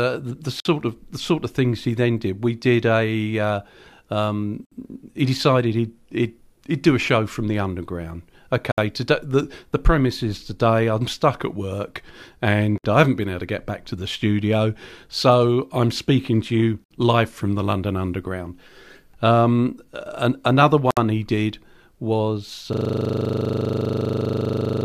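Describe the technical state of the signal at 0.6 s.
At 0.6 s there is a gap at a join of encoded pieces, running from 0.60 to 0.65 s, between "the the" and "of the sort of", and recurring every 4 s. The speech was encoded in separate chunks and spliced without trimming, so each chunk's start-up delay and final-frame padding leave a gap of roughly 52 ms. It sounds like a sudden dropout, after which speech resumes where it stopped. A spectrogram shows a full-height blank stripe with slightly smeared edges, and the waveform drops to a flat line.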